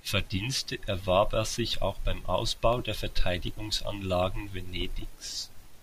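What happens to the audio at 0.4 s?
Nothing goes wrong at 0.4 s; the audio runs on intact through that moment with no dropout, click or other fault.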